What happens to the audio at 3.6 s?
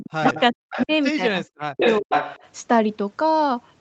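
Nothing goes wrong at 3.6 s: the speech there carries through intact, with only the ordinary band limit of the call path and no dropout, glitch or distortion.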